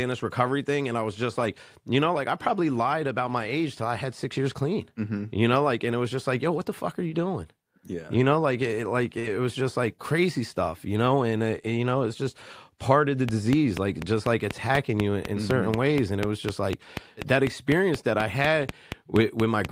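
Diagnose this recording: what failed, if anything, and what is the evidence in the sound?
A train of clicks runs from 13.29 s to the end. The pulses are alike and regular, about 4.1 per second, and stand well above the speech, in pauses too. The likely cause is interference on the analogue wiring from nearby equipment.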